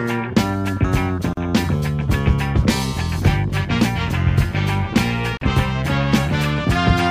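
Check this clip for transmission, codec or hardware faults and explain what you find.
There are two gaps at joins of encoded pieces, at 1.33 s and 5.37 s, 4 s apart. Each is a 40 ms gap with smeared edges. Separately encoded pieces were joined untrimmed, leaving encoder delay and padding.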